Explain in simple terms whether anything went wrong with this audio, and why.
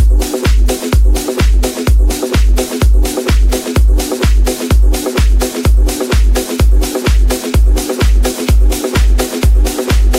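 Nothing went wrong with this recording. Listening through it, there's no point where the sound breaks, jumps or changes in a way that would signal a technical problem.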